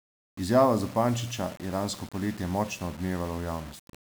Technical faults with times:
0.00-4.05 low bit depth without dither

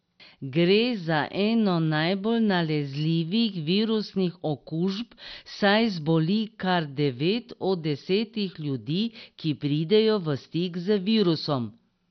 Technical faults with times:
0.00-12.11 MP2 compression

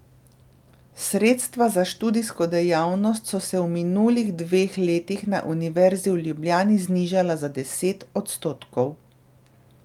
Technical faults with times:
none

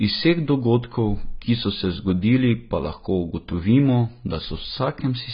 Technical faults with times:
0.00-5.33 AAC compression

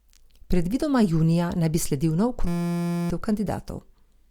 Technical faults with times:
2.47-3.10 system hang loop

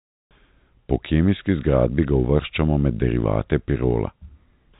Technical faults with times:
none

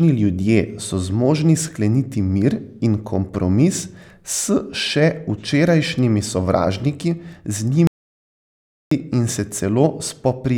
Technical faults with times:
7.87-8.91 audio dropout to silence

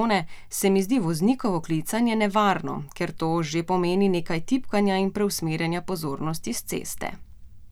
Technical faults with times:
none

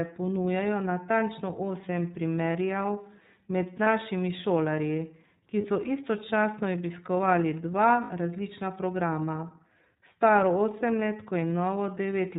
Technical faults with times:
0.00-12.39 iLBC codec
3.84-3.87 lost iLBC frames
5.61-5.65 lost iLBC frames
8.04-8.11 lost iLBC frames
9.95-9.98 lost iLBC frames

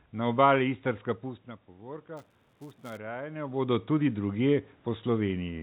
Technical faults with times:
1.67-4.39 automatic gain rising
2.17-2.97 buffer tearing

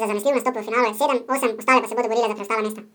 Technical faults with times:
0.00-2.95 audio read two samples at a time (double speed)

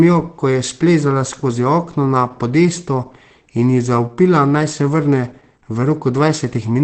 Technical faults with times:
0.00-6.83 Opus compression

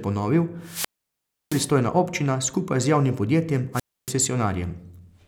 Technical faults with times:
0.61-1.73 wireless microphone squelch dropout
3.73-4.13 wireless microphone squelch dropout

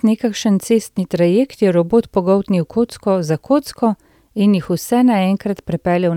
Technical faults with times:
none

